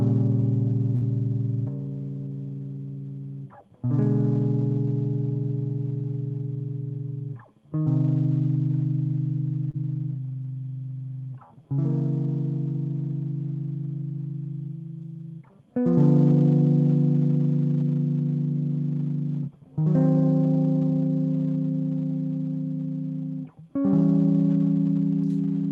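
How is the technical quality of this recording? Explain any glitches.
The music has two network-related glitches.

At 0.95 to 1.03 s there is a burst of packet loss. About 60 ms of audio arrived too late or not at all, so the receiver stretched the last sound across roughly 57 ms and faded it down. The music turns into a brief held, dimming sound and then resumes slightly further on, with that stretch missing.

At 9.71 to 9.75 s there is a short concealed packet loss. About 20 ms never reached the decoder in time. The receiver patched the hole by extending the preceding sound for about 23 ms and blending back into the real signal, which leaves a fleeting smear or wobble in the music.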